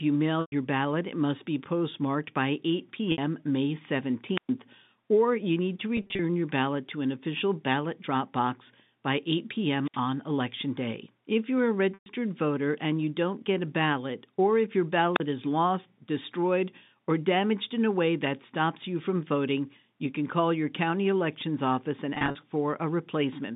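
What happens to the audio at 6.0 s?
Packet loss with pitch repetition, from 5.97 to 6.19 s, between "or you need to" and "your ballot to an". About 120 ms goes missing in short gaps of 30 ms or less, and the receiver fills each by repeating the last pitch cycle, so the sound turns briefly held and buzzy.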